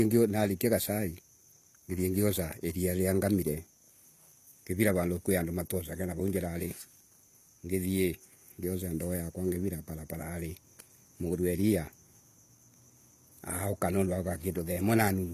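From start to finish, the speech carries plainly audible damage of the kind HE-AAC compression leaves, likely from encoding at a low bitrate around 24 kbps. The upper band is rebuilt by copying lower frequencies upward rather than coded directly, so s sounds come out gritty and metallic. On a spectrogram, the treble shows blocky, repeated patterns whose harmonics do not line up with those below, and nothing appears above 14.9 kHz.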